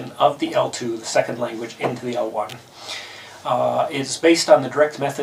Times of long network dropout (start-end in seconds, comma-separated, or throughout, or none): none